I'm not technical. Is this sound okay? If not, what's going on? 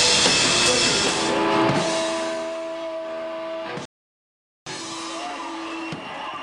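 No, not quite. At about 3.85 seconds the sound drops into silence for roughly 0.8 seconds, then picks up at 4.66 seconds exactly where it left off. That's a rebuffering stall: the player ran out of downloaded audio and waited for more. Nothing is missing, but the pause is added.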